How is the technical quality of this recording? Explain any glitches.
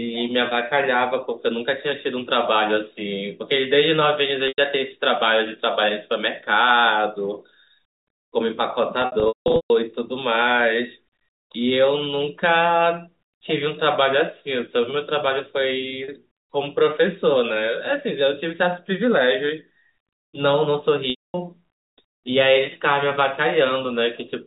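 The speech has four brief dropouts where the sound freezes into a buzzy hold, and in the longer ones fades briefly to silence. These are packet loss with pitch repetition, heard over narrowband G.711 telephone coding with nothing above 4 kHz.

At 4.48 s (100 ms), 9.02 to 9.70 s (losses scattered across that span, longest run 180 ms), 16.04 s (40 ms) and 21.1 to 21.34 s (240 ms), the receiver loops the last pitch period and fades it out. The 16.04 s gap sounds only slightly held. The longer gaps drop to silence before the speech cross-fades back.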